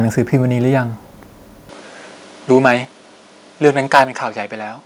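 At 1.69 s the speech abruptly loses its top end and stays that way to the end of the clip. The tone takes on a different colouring, the level shifts by roughly 5 dB, and a new noise floor appears around 40 dB beneath the voice. There is no gap at the change. This is an input switched to a poorer device, likely the system moving mid-recording from one microphone to a lesser one with a narrower band and its own noise.

From 2.54 to 2.72 s the loudest syllables turn harsh and crackly, with peaks pushed about 3 dB past the converter's limit and a small fraction of samples flattened. The same happens more severely from 3.65 to 4.03 s, where peaks run about 8 dB over and the edge is gritty. Both are microphone overload, likely from input gain set so high that the converter cut off the tops of the waveform.

At 2.85 s, shortly after the first distorted stretch, the voice and the background drop together by about 5 dB in a single step. 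The same drop of about 5 dB comes again at 4.05 s, right after the second overload. This is the microphone volume stepped down, likely by call software that detected the clipping and lowered the device's input gain in one move.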